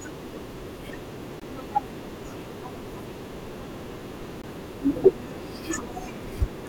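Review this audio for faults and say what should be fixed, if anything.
Two short holes with hard edges break up the speech, from 1.40 to 1.42 s and from 4.42 to 4.44 s. Each silence lasts 20 ms and the two are 3.02 s apart. This is a gap between chunks. The audio was handled in 3-second blocks, and at each join the player or codec left padding or started the next block late, so the sound stops abruptly and then resumes. To prevent it, play chunks back to back without gaps and trim the codec's padding at each boundary.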